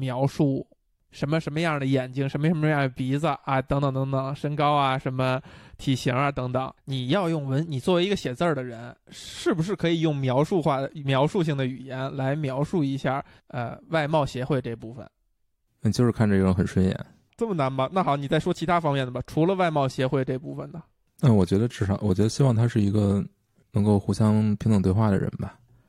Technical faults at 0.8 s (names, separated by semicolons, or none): none